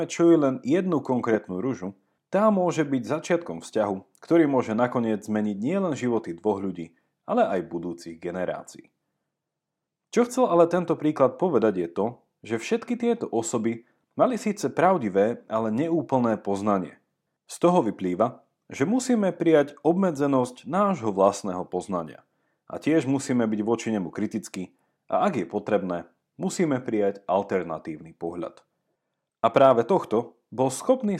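Nothing stood out on listening to this speech recording.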